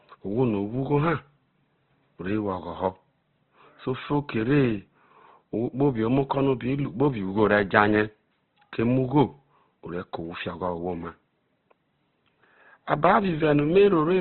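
Speech, likely squeezed through heavy Opus compression at a rate that fits about 12 kbps, cutting everything above 4.2 kHz throughout and leaving noise-filled bands grainy and rough.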